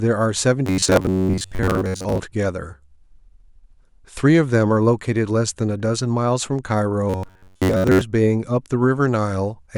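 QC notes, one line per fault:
0.66–2.20 s and 7.10–8.02 s, robotic sound from repeated short buffers: the speech collapses into a rigid, metallic buzz pitched at 93.8 Hz that still loosely tracks the syllables. A steady tone at that rate fits a chunk of roughly 10.7 ms being replayed over and over, likely because fresh audio arrived too late and the gap was filled by looping the last buffer, so most of the real audio in these spans is skipped.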